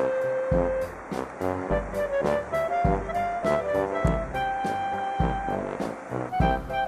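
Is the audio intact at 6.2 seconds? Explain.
Yes, at 6.2 seconds the sound runs on cleanly, with no dropout, glitch or other fault.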